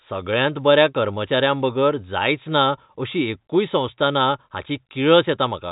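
No faults are audible; the speech arrives over ordinary G.711 telephone coding, with the band stopping at about 3.8 kHz as that path dictates.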